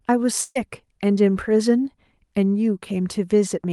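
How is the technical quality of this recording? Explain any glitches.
The recording has one clear glitch, a burst of packet loss. The call path carrying the speech tops out near 12 kHz, which fits Opus at a modest bitrate.

From 0.43 to 0.57 s, about 120 ms of audio was lost in transit. The receiver extended the last sound and faded it, giving a short held sound before speech jumps ahead. A spectrogram shows a frozen spectrum dimming out, and the waveform shows a shrinking envelope.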